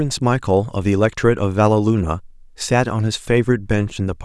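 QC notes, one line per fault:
Nothing stood out on listening to this speech recording.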